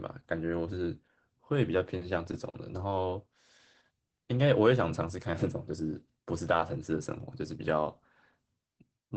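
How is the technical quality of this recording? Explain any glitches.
The recording is clearly degraded by Opus voice compression throughout. The speech is band-limited to 8.6 kHz and sounds muffled, hoarse and slightly robotic. Coarse wideband SILK linear-prediction coding fits a bitrate of roughly 12 kbps.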